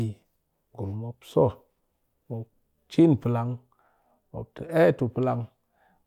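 Listening to this speech recording, nothing technical stood out as wrong at any point.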